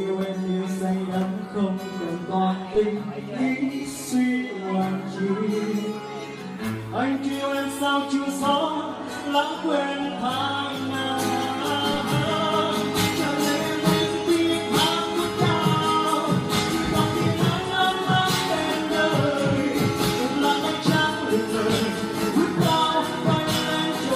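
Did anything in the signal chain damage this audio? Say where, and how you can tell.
Yes. At 2.75 s there is a DC step, where the waveform's zero line suddenly jumps by about -30 dBFS. This fits a converter recalibrating or an offset input being switched in at the analogue-to-digital stage. The jump is heard as a single low thump or click while the audio carries on unchanged. The offset does not hold. It drains away in a way that matches a 5 Hz high-pass, so the baseline settles back gradually instead of snapping back.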